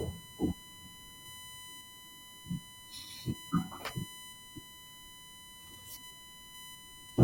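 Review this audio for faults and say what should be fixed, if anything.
USB whine runs through the entire speech clip: a fixed-pitch tone at 1 kHz with harmonics, strongest at 3 kHz, sitting roughly 15 dB below the speech. The 1 ms USB frame rate modulates current draw, which leaks into the audio through shared power or ground. To prevent it, power the interface from a clean supply or a powered hub, and break the ground loop with an isolator or ferrite.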